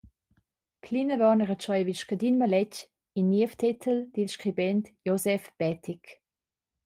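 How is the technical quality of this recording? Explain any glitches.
The recording has three brief glitches, all lost packets rebuilt from error correction, at 2.79–2.81 s, 3.73–3.75 s and 5.71–5.77 s. The first two each last 20 ms and sound like one lost packet. The third lasts 40 ms, which points to two separate packets. Each time, the following packet carried a low-bitrate copy that the decoder played instead. The sound turns briefly rougher and noisier, but nothing goes silent. That missing gap distinguishes this from a dropout or from concealment that guesses at the lost audio.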